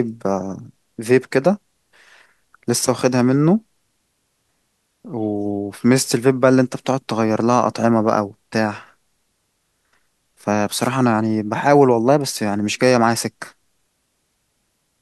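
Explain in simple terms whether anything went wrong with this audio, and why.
At 10.81 to 10.90 s, a brief swish of static breaks across the speech. This is a wireless microphone noise hit. The radio link from a cordless microphone weakened for a moment, likely because reflected signals cancelled each other out, and the receiver's own hiss rushed in to fill the gap. Unlike a digital dropout, where the sound cuts to silence or stutters, this one is a burst of noise laid over the speech.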